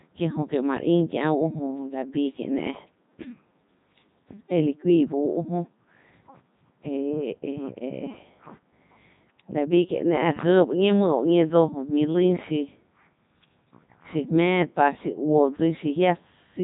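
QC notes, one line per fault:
Throughout, Codec 2 vocoder. The speech comes out robotic and buzzy, with heavy damage. The decoder rebuilds it from sine waves, using only pitch, voicing, energy and a spectral envelope, so the original waveform is lost. Breathiness and natural texture give way to a synthetic hum. The damage fits Codec 2 at its top rate of 3.2 kbit/s. Nothing reaches above 3.8 kHz, so the sound is dull and narrowband.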